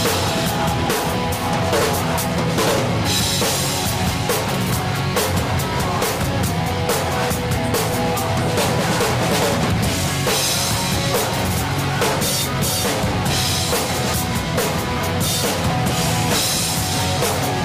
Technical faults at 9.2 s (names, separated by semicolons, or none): none